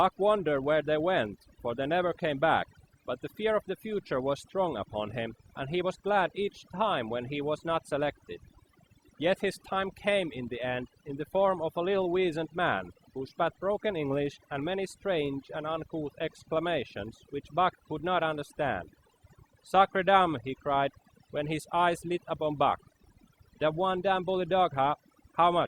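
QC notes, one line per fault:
Throughout, overdone noise removal: bands near the noise estimate are pulled to near silence, leaving twinkling specks between phrases and taking quiet parts of the voice with them.
Throughout, filter restarted on every block: each block starts from a cleared filter state, producing a transient that forms a 50 Hz buzz rising and falling with speech level.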